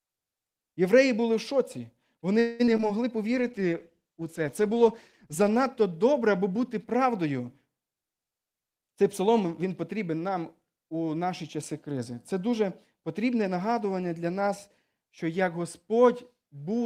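It's a speech clip from a call, and the trouble starts around 2.39 s with a call audio freeze: the last sound is stretched into a fading buzz or hiss for about 0.2 s until 2.62 s, which is likely the jitter buffer running dry while packets were held up. Nothing is lost, but that pause gets inserted into the speech. Right after, there's short concealed packet loss at 2.66–2.82 s and again at 2.77–2.81 s. Each time about 20 ms never made it to the decoder, and the receiver patched over it by extending the previous sound, so you get a brief smear or wobble rather than a clean dropout. From 3.33 s to 6.24 s there's a call bitrate drop, with the encoder pushed from 32 to 14 kbps and sitting at the bottom for about 2.1 s. The voice goes coarse and muffled as the top end gets cut, then opens back up. Finally, 7.91–9.45 s is a jitter buffer speed-up. The receiver trims pitch-period slices to drain excess buffered audio, removing something like a fifth of a second overall. 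The speech runs at about 112% with unchanged pitch, so it sounds a bit hurried.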